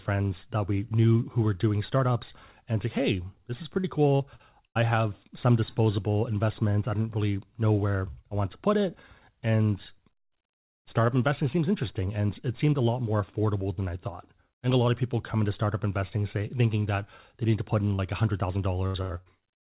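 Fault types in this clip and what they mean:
Repeated packet loss (robotic sound): Packets kept failing to arrive in time between 3.80 and 4.78 s, right after "say hey this is", leaving four holes, the longest 79 ms. Each was patched by extending the previous sound, so about a fifth of the span turns choppy and robotic before "have some disposable investments".
Short concealed packet loss: Roughly 40 ms of audio never reached the decoder at 17.95 to 18.01 s, just after "need to put in", and again at 19.22 to 19.29 s. The receiver extended the preceding sound and blended back, heard as a brief smear or wobble.
Burst of packet loss: Several consecutive packets went missing at 18.86 to 18.97 s and 19.02 to 19.13 s, about 80 ms each. The receiver stretched the last sound while fading it, giving a held buzz or dying hiss, then jumped ahead with that stretch gone.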